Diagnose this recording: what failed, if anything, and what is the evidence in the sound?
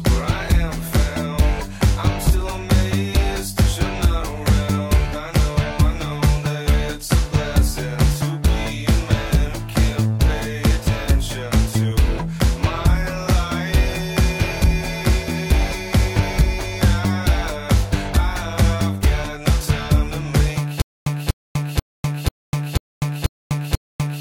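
Playback likely stalled from 20.8 s onward, causing stutter with silent gaps: a 0.24 s fragment repeats seven times between 0.25 s digital silences.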